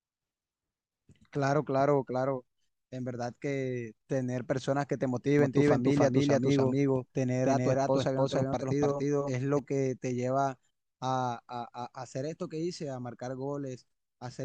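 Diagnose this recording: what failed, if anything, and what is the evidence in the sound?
From 5.39 s to 9.59 s, the speech has a doubled audio track. A second full-band copy runs roughly 300 ms behind the first, at about the same level. It carries no reverb tail or room colour, so it is not an acoustic echo. The copy cuts in and out abruptly at both ends. The stage is likely the capture routing, where the same signal reaches the mix twice and one path runs slower.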